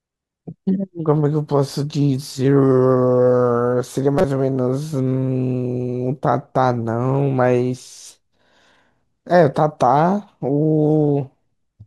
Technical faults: corrupt frame decoded

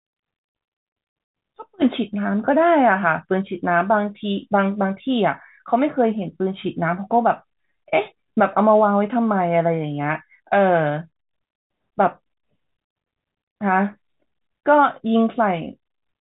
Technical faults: none

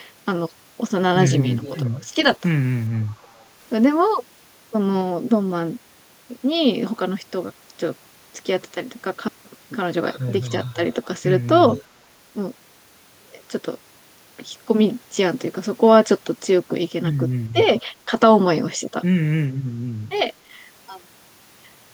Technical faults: echo leak; speech suppressed in double talk

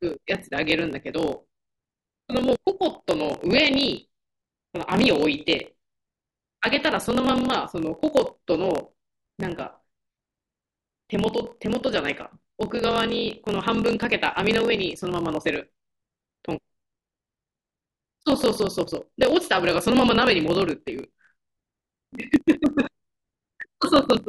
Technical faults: block size mismatch (truncated)

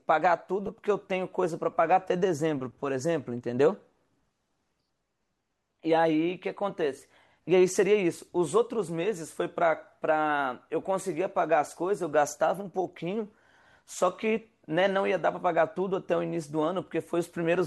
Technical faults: lost LE Audio frames

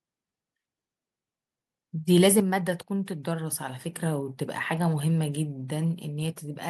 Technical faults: microphone overload; microphone volume stepped down

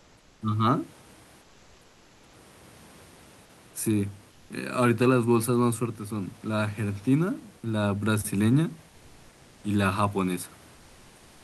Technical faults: comfort noise in place of the background

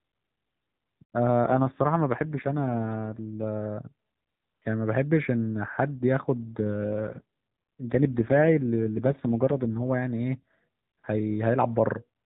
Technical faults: AMR rate drop

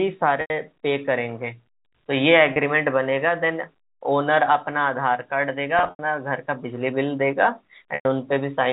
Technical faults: packet loss with pitch repetition

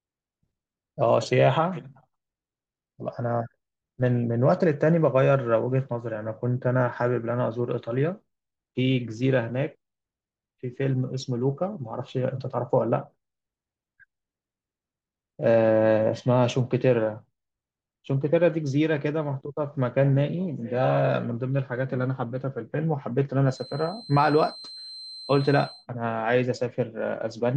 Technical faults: feedback whistle

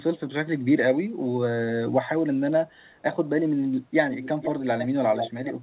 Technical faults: echo leak

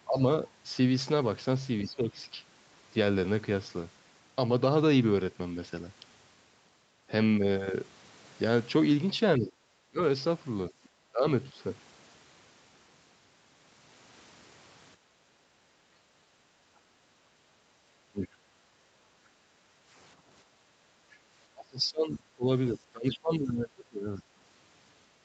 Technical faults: speech suppressed in double talk; other side's voice leaking through; background gated by the echo canceller

